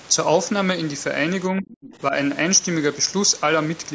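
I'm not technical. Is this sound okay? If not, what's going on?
No. From 1.52 to 1.75 s the voice drops sharply for a brief moment, about a fifth of a second in all. This is speech suppressed in double talk. Both sides likely spoke at once, and the call's echo canceller turned the talker down along with the echo.

Right after, from 1.72 to 1.96 s, a faint second voice comes through, well below the talker. This is the other side's voice leaking through. It was likely played on the talker's loudspeaker, picked up by the microphone, and not fully removed.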